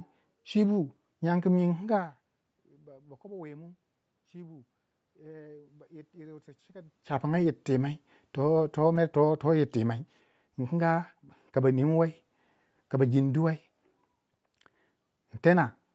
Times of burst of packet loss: none

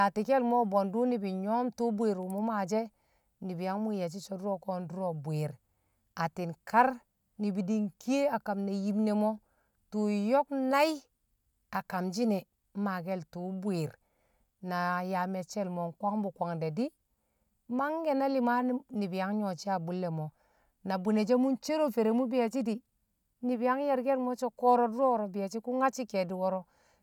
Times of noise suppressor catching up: none

